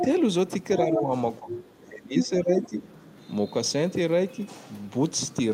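Other side's voice leaking through appears as brief scraps of a second voice at 0.0 to 0.05 s, 0.96 to 1.01 s, 1.5 to 1.63 s and 2.63 to 2.67 s. They sit roughly 5 to 15 dB under the speech. The likely cause is residual loudspeaker echo the canceller missed. Unlike suppression, this adds sound rather than removing it.

Speech suppressed in double talk pulls the talker's own voice down at 0.85 to 1.11 s, 1.39 to 1.53 s and 1.84 to 2.79 s. The dips deepen from about 5 dB to about 20 dB, likely because the canceller turned both sides down while they overlapped. The suppression itself adds no foreign voice, only the talker's level drops.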